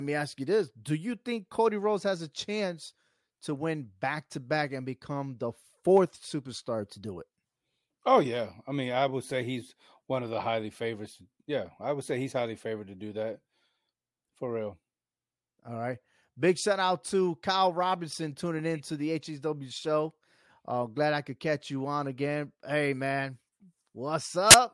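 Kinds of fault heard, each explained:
File tags played as audio: the player read an embedded cover picture, stored as compressed image data, as sample values, so from 24.51 to 24.54 s the speech gives way to a hard-edged, 33 ms burst of very loud white noise.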